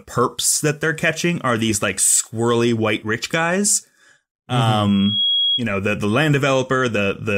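From 4.85 to 5.64 s, loudspeaker feedback squeal: a 3.3 kHz tone swells over roughly 0.4 s to about the speech level, ending just before "know the the land".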